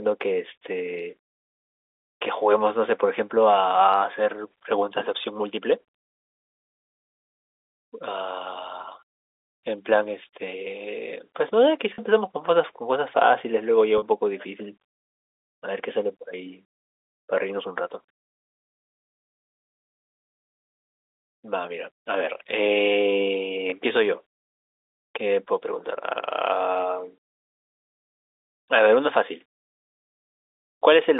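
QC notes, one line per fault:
11.94–11.98 s, 13.98–14.02 s and 23.70–23.72 s: packet loss with pitch repetition. Brief gaps of 40, 40 and 20 ms are filled by repeating the last pitch period. Each sounds like a short, buzzy held tone. The lengths fit one or two lost 20 ms packets.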